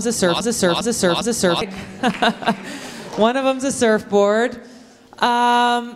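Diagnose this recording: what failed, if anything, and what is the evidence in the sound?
A broken-record loop is under way from the start: a 0.40 s fragment repeats exactly three times, back to back, until 1.61 s. The likely cause is a stalled playback buffer resending its last block. Waveform and spectrogram show identical tiles every 0.40 s.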